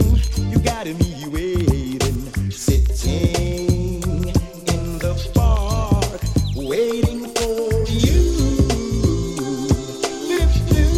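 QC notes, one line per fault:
8.60 to 10.33 s, channel delay (comb filtering): one channel runs late by a tiny offset, about 0.02 ms, which fits a single-sample delay, and when the pair is summed to mono the shared content cancels near the top of the band, around 20 kHz. The sound turns slightly dull and airless rather than audibly hollow. Unlike a plain low-pass filter, the loss comes from phase cancellation and stops abruptly when the channels realign.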